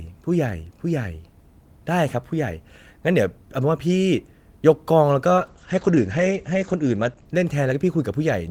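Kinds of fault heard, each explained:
Call bitrate drop: From about 5.39 s to 8.33 s the speech turns coarse and muffled as the encoder gets starved of bits, consistent with a fall from around 32 to 10 kbps. The top end collapses from 20 kHz to 8 kHz, bottoming out for 1.37 s.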